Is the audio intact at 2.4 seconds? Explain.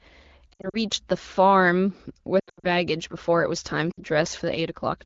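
No, not quite. Between 2.39 and 2.68 s there are lost AMR speech frames: about 200 ms of audio goes missing in short gaps scattered across roughly 240 ms, with the longest run 80 ms. The decoder covers each gap by reusing the last good pitch and vocal-tract settings at dropping gain, so you hear the sound warble and smear, fading out quickly since this is wideband. Then it comes back a bit thin and rough, against the clear 12.65 kbit/s HD Voice around it.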